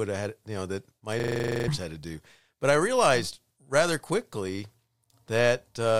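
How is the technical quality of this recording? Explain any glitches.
There's one real glitch, a system hang loop from 1.2 to 1.68 s. Something in the playback or capture chain froze while the audio hardware kept replaying the same ring buffer, so a single 40 ms slice of the speech repeats about a dozen times. At 25 repeats per second it comes across as a rough, buzzy stutter rather than a clean tone, and roughly half a second of real audio is simply gone underneath it.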